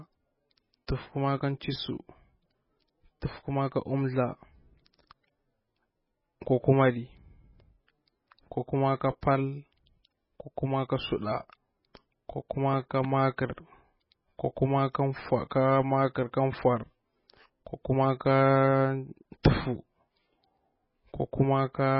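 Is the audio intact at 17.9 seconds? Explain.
No. At 17.9 s the speech carries MP3 compression damage, which runs through the whole clip rather than starting there. It is likely the result of MP3 encoding at a very low bitrate, one that fits roughly 16 kbps. Starved of bits, the encoder discards everything above 5.5 kHz and zeroes the weaker frequency lines, which flicker in and out between frames. The speech sounds dull and watery, with swirling, metallic s sounds and smeared consonant onsets.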